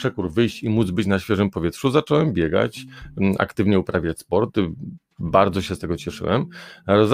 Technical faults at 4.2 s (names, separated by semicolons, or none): overlap between stream segments